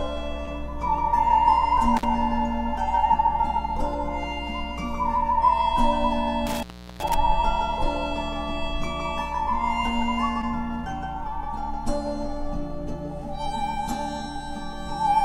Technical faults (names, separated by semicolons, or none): short concealed packet loss; intermittent contact